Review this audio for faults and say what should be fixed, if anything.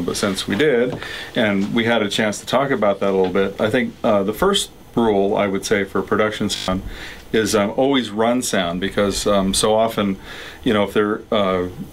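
System hang loop, 6.56 to 6.68 s: during a computer or driver freeze the hardware replayed one 20 ms buffer six times, producing a brief 50 Hz buzz. To prevent it, give the audio thread real-time priority and add a watchdog that mutes output when the buffer stops refilling.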